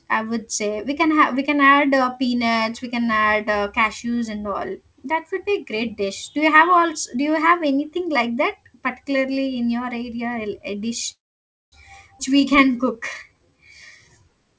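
From 11.12 to 11.74 s the sound stops for about 0.6 s, nearly all of it silence after a brief tail of the last sound. This is likely a call audio freeze: packets stalled, the jitter buffer emptied, and playback resumed where it left off, inserting a gap rather than losing audio.

At 12.18 to 12.21 s comes a skip ahead. A stretch of roughly 150 ms was discarded, probably as the buffer shed the backlog built up during the freeze. Playback jumps straight across it, with the two sides joined almost seamlessly.

From 12.29 to 13.58 s the jitter buffer slow-down is rebuilding its reserve by repeating short pitch periods, adding 165 ms. The sound plays at 88% speed with unchanged pitch, so it feels drawn out, over a band that stops at 8 kHz, which fits a G.722 call path.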